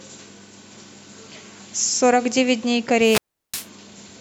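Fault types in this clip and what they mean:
Wireless microphone squelch dropout: the analogue FM radio link between the microphone and its receiver weakens until the receiver's squelch circuit shuts the output off rather than pass the rising noise. Between 3.01 and 3.68 s the speech gives way to a brief swell of hiss or static, then a hole of near silence lasting about 0.36 s, after which the squelch reopens and the speech comes back once the signal recovers.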